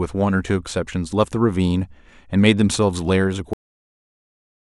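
Cut-off end at 3.53 s: the speech stops abruptly in the middle of a sound and falls straight to digital silence, which holds for the remaining 1.1 s. The final stretch of audio was never written or played out, so the sound is severed rather than finishing. There is no decay, fade or room tail after the cut, which makes it sound as though the recording was chopped off mid-utterance.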